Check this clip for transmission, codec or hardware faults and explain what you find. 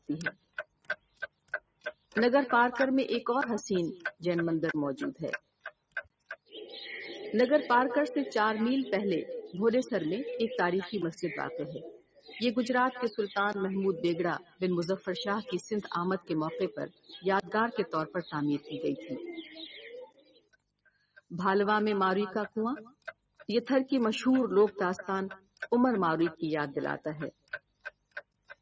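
A speech-tuned noise suppressor is acting on the sound, causing a continuous pumping fault and eight deeper level dips.

Noise suppressor applied to music or sounds, throughout: the suppressor mistakes sustained tones, ambience and decays for noise and pulls them down, so the level swings by around 15 dB. Attacks pass, but held material sinks, giving a pumping, thinned character.

Sound cut by the noise suppressor, at 0.00–2.16, 5.39–6.52, 11.84–12.33, 14.39–15.08, 16.19–21.31, 22.90–23.45, 25.38–25.64 and 27.32–28.62 s: here the gain reduction deepens to about 18 to 21 dB. It truncates tails and sinks steady passages, including across the long 16.19–21.31 s stretch. The band ends at 8 kHz, which is expected from call microphone processing.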